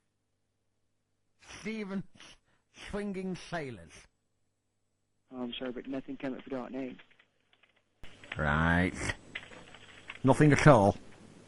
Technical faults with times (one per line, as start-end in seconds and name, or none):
0.00-8.04 one channel inverted